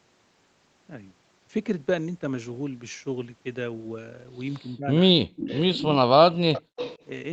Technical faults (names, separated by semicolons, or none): speech suppressed in double talk; echo leak